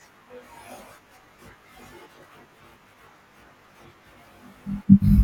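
Throughout the speech, the sound is rough and slightly doubled, thinned by a dense series of fixed notches starting near 30 Hz. This is channel delay (comb filtering): one channel lags the other by roughly 20 ms, and summing them to mono cancels shared content at evenly spaced frequencies.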